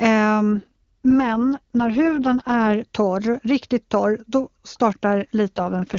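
From 0.52 to 2.74 s, before "torr riktigt", and from 5.56 s onward, an AMR rate drop starves the codec, which fits 23.85 falling to 6.6 kbit/s, leaving speech rough and synthetic.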